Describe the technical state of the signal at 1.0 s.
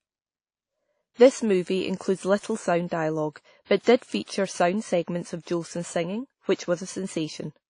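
At 1.0 s the speech carries the same damage heard across the whole clip, most likely from WMA compression. Nothing sounds above about 10.1 kHz, and the remaining band has a ringing, washy quality with hiss that swells and fades with the signal. A transform coder at low bitrate smears its quantisation error over each long block and drops weak spectral lines. The degree of damage fits a rate around 32 kbps.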